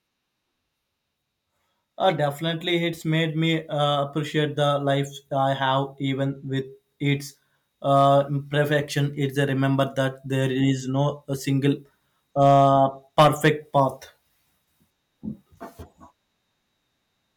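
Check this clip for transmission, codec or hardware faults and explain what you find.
There's hard clipping in three places: 7.95 to 8.14 s (about 2 dB over), 12.42 to 12.73 s (about 3 dB), and 13.18 to 13.80 s (about 7 dB). Peaks exceed what a stage can pass and get sliced flat, adding high harmonics. The first two crackle briefly, and the last turns into a harsh fuzz.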